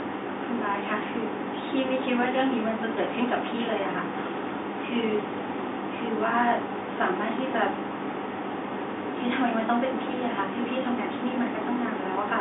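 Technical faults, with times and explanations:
No technical faults can be heard anywhere in this speech.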